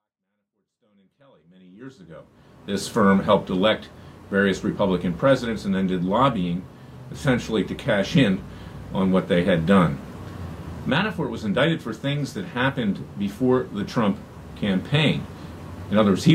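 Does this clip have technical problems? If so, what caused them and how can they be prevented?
No, this clip has no technical problems, so there is nothing to prevent.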